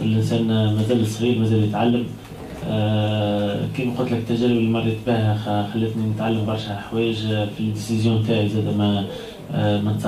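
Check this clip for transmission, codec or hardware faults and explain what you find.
No faults are audible anywhere in the clip. Nothing in the audio calls for further explanation.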